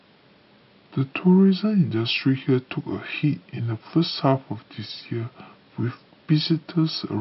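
Wrong sample rate runs throughout the speech. Playback is slowed to about 0.73 times, pitch drops about 5.5 semitones, which fits 44.1 kHz audio played at 32 kHz.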